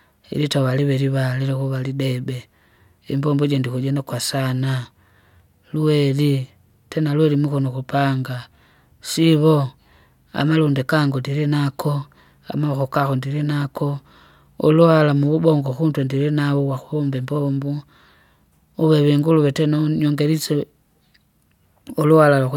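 No technical faults occur at any point in the recording.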